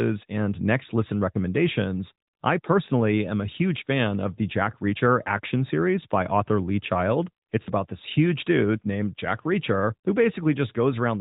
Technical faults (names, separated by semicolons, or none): none